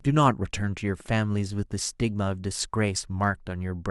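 No technical faults occur anywhere in this speech recording.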